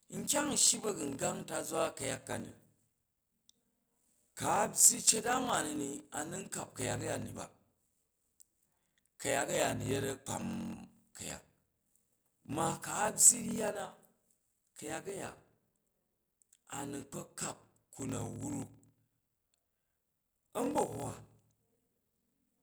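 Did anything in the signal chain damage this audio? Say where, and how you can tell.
Yes, at the driver or buffer stage: a block size mismatch (padded) runs through the whole clip. A steady 41.7 Hz buzz sits under the speech, which plays at 0.889 times normal speed at about its normal pitch. This fits 1024-sample blocks being zero-padded to fill larger reads.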